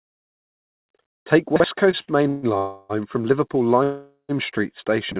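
Chunks out of order at 1.56–1.64 s: a 40 ms block of audio lands one chunk late, after the block meant to follow it. Nothing is lost, but the swapped sequence creates a brief jumbled blip.

A short stall from a late packet follows at 1.91–1.96 s, and another at 2.02–2.10 s. Each time the jitter buffer runs dry, the last sound is stretched, by 16 ms and then 57 ms, until the packet arrives. Both are heard as a sound held slightly too long, with a faint buzz or dip.

A call audio freeze occurs at 2.28–2.46 s, again at 2.58–2.92 s, and a third at 3.83–4.32 s. These are likely caused by packets held up in transit that empty the jitter buffer. The receiver carries the last sound on as a fading buzz for 142 ms, 318 ms and 456 ms. The last freeze decays into about 100 ms of silence before the audio resumes exactly where it stopped.

Chunks out of order return at 5.12–5.20 s, with another 40 ms block one chunk late. 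This produces a jumbled moment at the very end.

Throughout, the call path's band limit at 4 kHz, consistent with G.711 mu-law, gives the audio its narrow telephone tone.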